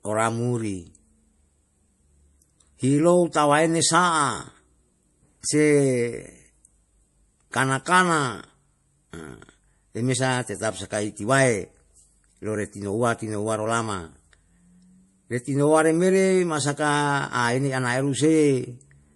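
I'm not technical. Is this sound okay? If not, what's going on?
No, not quite. From start to finish the speech has a watery, swirly quality. The crisp top end is missing too: nothing comes through above about 11.4 kHz, so s sounds lose their sparkle and can turn metallic. The likely cause is MP3 compression squeezed hard. To save space, the encoder cuts off the highest sounds and drops quiet details, which flicker in and out and leave that underwater feel.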